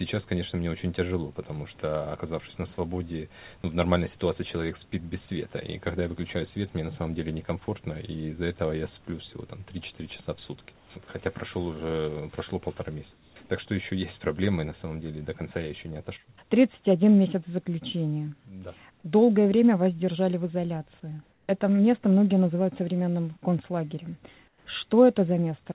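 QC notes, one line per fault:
3.62–3.64 s and 7.66–7.68 s: sound dropped by the voice detector. About 10 ms of sound gives way to steady noise for 20 ms, likely because the detector mistook it for background.
10.76–10.90 s, 13.12–13.36 s, 21.32–21.48 s, 24.48–24.66 s: comfort noise in place of the background. Transmission paused, likely through discontinuous transmission. Featureless synthetic noise replaces the real background, about 4 to 6 dB quieter, for 140 to 240 ms.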